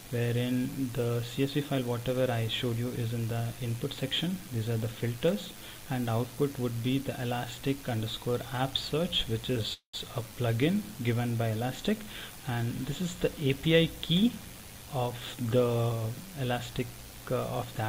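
There's a call audio freeze at 9.73 to 9.95 s. The sound stalls and the last bit gets stretched into a fading buzz or hiss for about 200 ms, around 110 ms of which is plain silence. Then the audio resumes right where it stopped, so nothing is lost but everything after it runs about 200 ms late. That's the classic sign that packets were likely held up and the jitter buffer ran dry.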